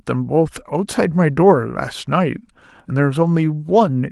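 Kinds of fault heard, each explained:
No faults can be heard in this speech recording.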